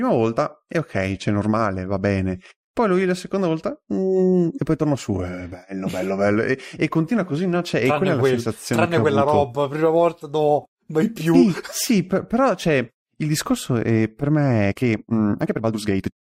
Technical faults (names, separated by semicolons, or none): time-stretched section